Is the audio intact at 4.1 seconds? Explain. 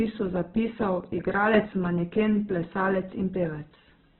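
No. At 4.1 seconds, as across the whole clip, the speech carries Opus compression damage, likely from a very low rate near 8 kbps in the music (CELT) mode. The encoder has narrowed the band so nothing survives above about 4.1 kHz, and with so few bits it fills the remaining bands with folded or noise content. The voice comes out muffled and band-limited, with a rough, grainy texture in place of clean tone.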